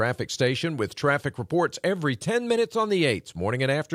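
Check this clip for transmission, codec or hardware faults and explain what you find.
No transmission, codec or hardware faults.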